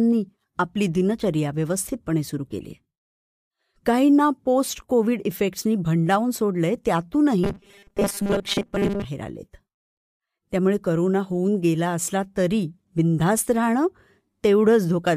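From 7.44 to 9.04 s, robotic sound from repeated short buffers: a rigid 200 Hz buzz, likely from looping a 5 ms buffer, unlike warble, whose pitch wanders.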